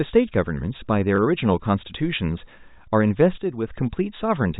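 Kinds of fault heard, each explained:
Packet loss with last packet repeated: Between 1.16 and 1.18 s, a 20 ms gap, which fits a single lost packet, is filled by replaying the preceding packet, which comes through as a small blip.
One channel drops out: From 3.38 to 3.68 s the level falls abruptly by about 6 dB and then recovers. This is likely one stereo channel going silent, so the mono sum carries only half of the shared content for that stretch.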